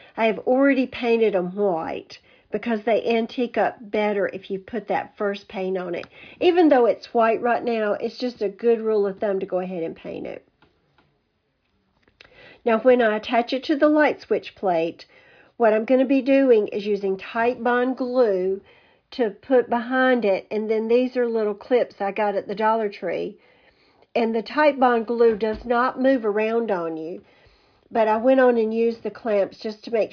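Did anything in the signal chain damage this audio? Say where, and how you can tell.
No, nothing in the signal chain damaged this audio.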